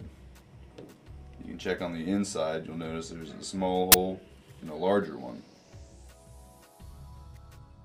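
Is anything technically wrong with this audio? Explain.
Yes. From 3.92 to 3.94 s there is file tags played as audio: the player read a block of embedded cover-picture data as if it were samples. Compressed image bytes look random, so they come out as a very loud, hard-edged burst of white noise.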